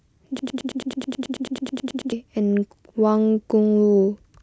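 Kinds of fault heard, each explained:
Broken-record loop: A 0.11-second speech fragment repeats exactly 16 times, from 0.39 to 2.12 s. The playback likely stalled and resent its last fragment.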